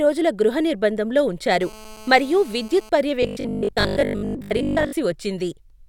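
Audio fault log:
1.61–2.89 s, GSM phone buzz: steady raspy 217 Hz burst interference, about 22 dB below the speech, from rectified radio pulses; spectrogram shows horizontal lines at 217 Hz and its harmonics.
3.23–4.93 s, robotic sound from repeated short buffers: rigid metallic 50 Hz buzz over most of the speech, likely a 20 ms segment replayed; waveform shows identical repeating cycles, spectrogram a 50 Hz comb.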